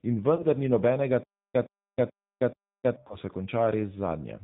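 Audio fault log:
Throughout: G.729 codec. The speech is band-limited with nothing above 4 kHz, and it has a slightly rough, synthetic texture. That fits an 8 kbit/s G.729A stream, which rebuilds each frame from a vocal tract filter, a pitch predictor and a few coded pulses.
0.36–0.46 s and 3.07–3.17 s: VoIP packet loss concealed by the speech codec. Each gap fits one lost 30 ms packet. The decoder stretched its last pitch and filter into a fading sound, and the voice stays weak or distorted for tens of milliseconds after packets return.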